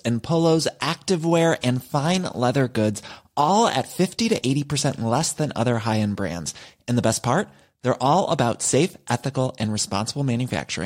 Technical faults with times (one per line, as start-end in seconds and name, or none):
none